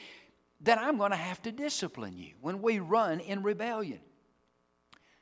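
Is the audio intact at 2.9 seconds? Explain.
Yes, the speech is intact at 2.9 seconds, with no dropout, click, distortion or other fault at that moment.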